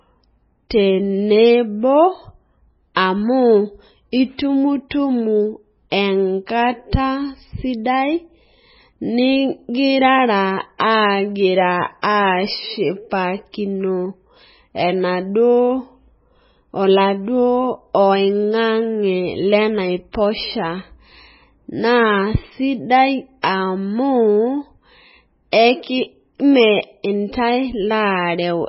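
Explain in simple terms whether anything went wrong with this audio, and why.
Yes, two things went wrong. The whole recording has a dull, watery, swirly quality, and nothing comes through above about 5.6 kHz, so the crisp top end of the speech is gone. That's likely heavy MP3 compression, where the encoder ran short of bits, threw away the treble, and let the weaker details flicker in and out.

On top of that there's pre-echo: a brief hiss just before some sharp sounds, at 2.94, 10.78, 12.02 (right before "ashipakino enaduo"), 23.42 and 25.51 seconds. The codec smeared its noise backwards into the quiet moment ahead of each attack, which also softens those attacks.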